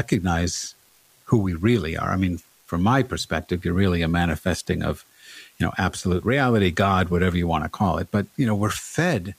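A speech recording carrying an unreliable data bit for its whole length: one marginal data line flips at random, adding identical spikes of about -44 dBFS. The result is a constant fine crackle, a fizz that stays audible through the pauses between phrases.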